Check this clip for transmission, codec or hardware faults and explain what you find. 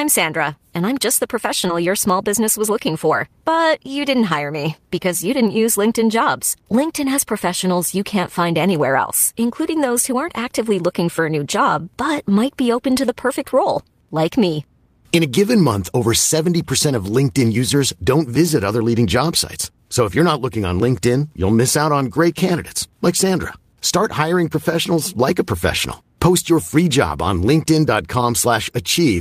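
Two transmission faults occur together, right after "and I'm just the" and before "your small business was."

From 1.67 to 1.70 s there is a short concealed packet loss. About 20 ms of audio arrived too late for the decoder. The receiver covered 11 ms of that hole by extending the preceding sound, then crossfaded into the real signal. The result is a brief smear or wobble. A short consonant at that spot can disappear entirely.

From 1.68 to 1.70 s there is a lost packet rebuilt from error correction. One 20 ms packet was lost. The following packet carried a low-bitrate copy of it, which fits Opus in-band forward error correction. The decoder played that copy, so no silence is heard. The rebuilt stretch sounds rougher and noisier than its surroundings, a grainy patch blended into the smear.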